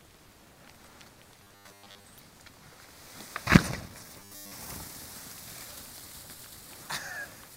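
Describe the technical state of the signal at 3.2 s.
At 3.2 s the signal is intact, with no audible fault at that point.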